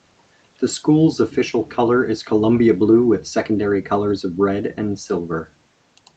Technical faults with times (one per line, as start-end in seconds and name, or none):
none